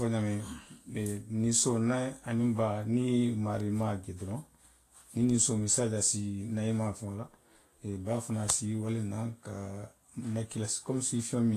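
Throughout the speech, the audio was likely pushed through Vorbis compression at a low setting, consistent with a bitrate near 33 kbps. Nothing remains above 14.2 kHz, and the coarsely quantised treble becomes grainy hiss, roughening voiced tones and blurring consonant attacks.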